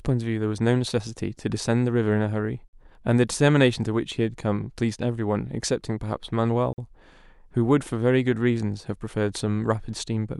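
At 2.68 s and again at 6.73 s the speech drops out for 50 ms, a gap between chunks. The stream was delivered in 4-second pieces, and each join carries a short stretch of inserted silence, so nothing is lost but the flow is interrupted. Each gap is a brief, hard-edged hole. On a waveform it appears as a flat line with abrupt edges, and on a spectrogram as a narrow, empty vertical band across all frequencies, repeating about 4 s apart.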